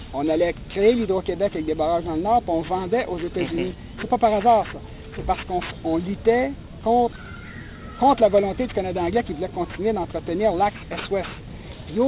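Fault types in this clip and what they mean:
aliasing: The audio was downsampled to what sounds like 8 kHz without an anti-alias filter, so content above 4 kHz folds back as gritty, unrelated tones, roughly 20 dB below the signal.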